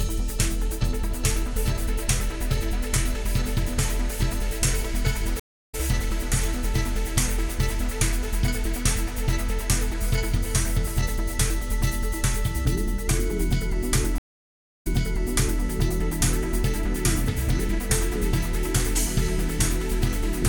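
Two stream reconnects break this audio. At 5.40 to 5.75 s it drops to silence for 0.32 s and resumes roughly 0.3 s further on. At 14.18 to 15.62 s a 0.66 s gap is followed by a 0.78 s replay. On a waveform each shows as a flat line, then a fresh decoder's brief fade-in, with a blank vertical band on the spectrogram.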